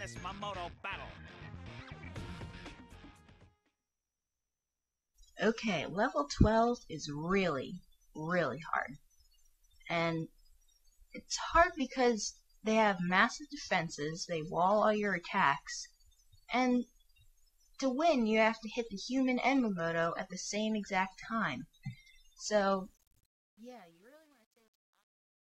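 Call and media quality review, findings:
Truncation distortion on a fade, 22.77 s to end (25.44 s). Grit enters as the fade level drops and is worst from about 23.23 s onward, the waveform stepping coarsely, which fits a gain or fade stage keeping roughly 10 bits with no dither. Probable component: digital volume/fade stage. Differs from packet loss or noise gating because the roughness grows steadily with falling level rather than occurring as abrupt, timing-driven gaps.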